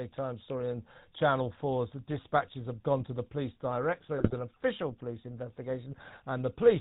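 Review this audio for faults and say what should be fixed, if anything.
The speech has a buzzy, gravelly roughness throughout, with a dull top end and no content above 4 kHz. This is the GSM full-rate codec, which fits the 13 kbps full-rate standard. It rebuilds the voice from a vocal-tract model driven by a regular pulse train, discarding two of every three excitation samples, so harmonics come out coarse and rasping. The damage is plainly audible across the whole clip. To prevent it, record or route the call through a wideband codec instead of GSM full rate.

From 4.18 to 4.43 s, just before "official police", the voice breaks into squawks, pops and a brief gargling burst. These are GSM bit errors: corrupted bits reaching the decoder scrambled the speech parameters over that quarter-second stretch. The density of the damage fits an error rate of roughly 1.4 percent on a weak radio link. 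To prevent it, capture over a stronger, cleaner connection or a digital path with error protection.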